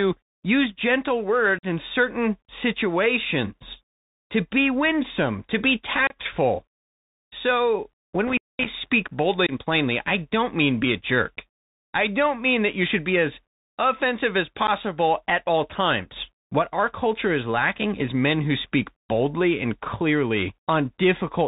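The Bluetooth CVSD headset codec runs through the whole speech clip, and its damage is plainly audible. Each sample is reduced to a single up-or-down bit with an adapting step, which fits a 64 kbps CVSD link. Nothing above 4 kHz survives, so the speech sounds boxed in. Sibilants turn scratchy, and a granular hiss sits underneath.

From 1.59 to 1.64 s, between "use gentle" and "in certain situations to", unconcealed Bluetooth headset packet loss punches an abrupt hole of about 45 ms. Roughly ten tiny voice packets went missing and nothing filled the gap. Shorter holes of the same kind follow at 6.07 to 6.16 s, with about 30 ms lost, and at 9.47 to 9.52 s, with about 22.5 ms lost. Each time the speech returns briefly quieter as the codec's step size rebuilds.

Intermittent contact strikes from 8.28 to 8.69 s, just after "so when". A loose cable or plug opens for about 220 ms, and the sound drops out with crackle at both edges, leaving faint hiss while the line is open.

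The last packet loss is a brief nick from 14.67 to 14.69 s, between "be as offensive as" and "at all times". Only about 11 ms is lost, heard as a momentary gap.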